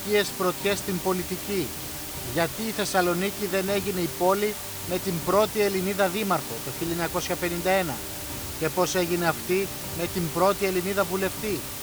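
Low bit depth with dither runs throughout: the audio is reduced to 5 bits with dither, leaving a constant, even hiss only about 10 dB below the sound.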